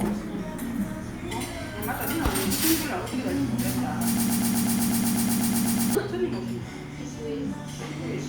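A recording of everyday sounds with one fault, a broken-record loop. From 4.17 s to 5.95 s, a fragment about 0.12 s long repeats exactly, back to back, 14 times. The result is a rapid, mechanical stutter with no variation between repeats. The sound that should have played in that stretch is gone. The likely cause is a stall in the player, encoder or stream, which kept resending the last fragment it held.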